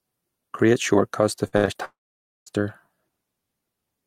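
Right after "shortcuts to", from 1.47 to 1.77 s, repeated packet loss chops the speech into a robotic stutter: four short holes, the longest 67 ms, patched by repeating sound. Then, from 1.85 to 2.48 s, a brief fading fill gives way to about 0.53 s of silence, likely a long network dropout. Unlike the choppy stretch before, this is one continuous gap, and the audio resumes with that portion missing.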